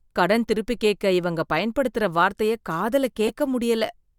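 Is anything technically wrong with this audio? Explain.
Yes, there are two spots where a corrupt frame got decoded. At about 1.58 s, a couple of damaged compressed frames played anyway, and the misread data threw energy onto the wrong frequencies, giving a quick blip. From 3.26 to 3.30 s, roughly three frames hit the same way, producing a louder, chirpy burst of noise.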